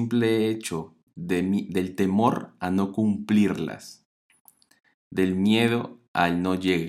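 From 3.69 to 6.68 s there are periodic USB or driver dropouts: every 0.5 s a tiny sliver of speech drops to silence, giving steady little ticks.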